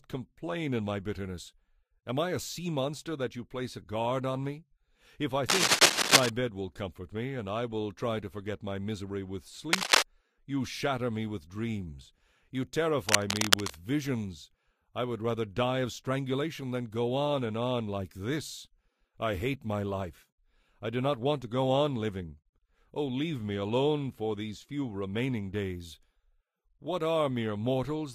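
The audio has cable scratch noise in three places: 5.49 to 6.30 s, 9.72 to 10.04 s, and 13.09 to 13.77 s. Dense, uneven scratching bursts sit over the sound, loudest in the first event. A worn cable or connector being moved is the likely cause.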